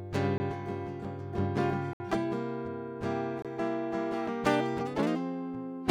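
A music clip with three blocks of digital silence, at 0.38 to 0.40 s (20 ms), 1.93 to 2.00 s (67 ms) and 3.42 to 3.45 s (25 ms). All three register as short holes, the longer one most clearly. Each drops to silence with no fade. That tells it apart from a faded dropout or level dip, and points to an output buffer not filled in time.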